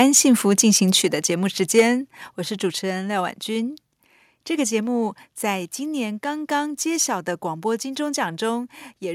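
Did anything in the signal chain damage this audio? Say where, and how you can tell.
Yes. Microphone overload at 0.0 to 0.2 s, about 0.6 s and 1.77 to 1.81 s: peaks run about 3 to 4 dB past the converter's limit and their tops are flattened, giving harsh crackle on the loudest speech. This likely happens at the converter, with input gain set too high, and the worst burst clips a sizeable share of samples.

Microphone volume stepped down at 1.02 s by about 4 dB, then again at 1.80 s by about 2 dB: speech and background drop together in one abrupt step, the second right on a distorted peak. This is likely call processing cutting the device's input level after detecting overload.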